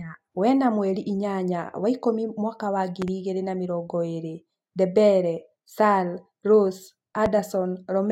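Loud pops occur twice in this speech clip: a double pop between 3.02 and 3.10 s, then a single pop at 7.26 to 7.29 s. Each jumps well above the speech, roughly 10 dB higher for the pair and roughly 15 dB for the later one. The likely cause is a sudden voltage step or pulse from a plug, switch, static discharge or driver glitch. The following circuitry shaped that pulse into a sharp pop, and the speech carries on beneath it.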